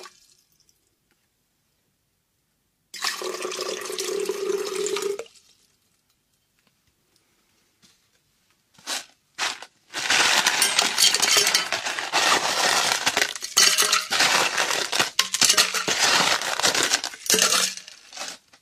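At 13.66 and 15.00 s, compressed frames are skipped: the audio jumps about one 46.4 ms frame ahead, giving a narrow spectrogram seam.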